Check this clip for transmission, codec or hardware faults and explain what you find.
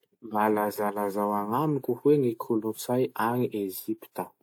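No transmission, codec or hardware faults turn up anywhere in this speech recording.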